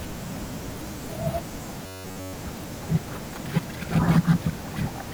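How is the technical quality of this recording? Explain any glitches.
The recording has one glitch: robotic sound from repeated short buffers between 1.82 and 2.33 s. The speech turns into a rigid, metallic buzz near 94 Hz. This likely happens because audio arrived too slowly and a fragment of about 11 ms was replayed over most of that stretch. Unlike a dropout or stutter, the sound never goes silent and still loosely tracks the speech.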